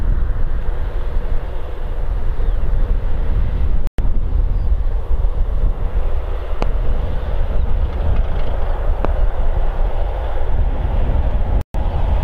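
From 3.87 to 3.99 s the sound cuts to silence for about 110 ms, then resumes as if it had played on. This is likely a Bluetooth dropout, with packets lost before reaching the headphones. Sharp loud pops land at 6.62 to 6.65 s and at 9.05 to 9.07 s, about 10 dB and 15 dB above the audio, which continues underneath. A second dropout silences 11.61 to 11.75 s.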